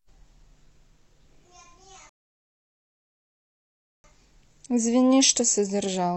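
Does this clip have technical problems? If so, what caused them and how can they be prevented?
Yes. A rebuffering stall from 2.09 to 4.04 s: the player ran out of downloaded audio, leaving silence that shows as a flat waveform and a blank spectrogram band. The speech then resumes exactly where it stopped, adding 1.95 s. A larger playback buffer or adaptive bitrate streaming would prevent it.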